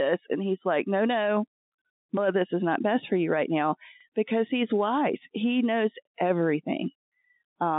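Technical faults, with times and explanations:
4.01 to 4.05 s, overlapping chunks: just after "for you right now", about 48 ms of sound plays twice where one chunk begins before the previous one ended, making a brief stutter before "because he's". The waveform shows that short stretch duplicated, with a visible discontinuity at the join, which fits chunks of about 2 s.
4.92 to 4.98 s, bit errors on a digital phone line: after "right now because he's", a few flipped bits on the G.711 line turn single samples into wrong values; a hit on a high bit or on the sign of a loud sample gives a sharp tick. Such a hit shows as a lone vertical spike in the waveform and a thin broadband stripe on the spectrogram, at a low, scattered error rate.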